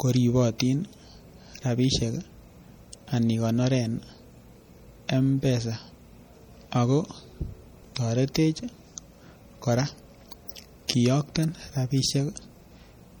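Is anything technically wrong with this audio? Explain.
Yes. Two problems can be heard in this speech clip.

MP3 compression damage runs through the whole clip and is plainly audible. The cause is likely lossy MP3 coding at a low bitrate, which fits something near 48 kbps. Short on bits, the encoder drops weak frequency lines, and they flicker on and off from frame to frame. The result is a watery, swirling texture, with metallic chirps on s sounds. Nothing remains above about 20.4 kHz.

Pre-echo appears at 0.58 s, 10.88 s and 11.35 s. The codec spreads its quantisation noise evenly across each block. When a sharp onset lands late in a block, noise sized for the loud part spills into the quiet moment before it. Here that spill lasts 17 ms, 14 ms and 11 ms. Each attack gets a brief hiss ahead of it and sounds softened.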